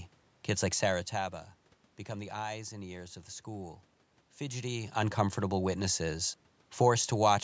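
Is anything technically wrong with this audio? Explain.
No, the speech shows only the expected call-microphone processing with its bandwidth topping out at 8 kHz, background room noise from the recording space, and level changes around half a second and four and a half seconds in where the talker shifted position relative to the microphone.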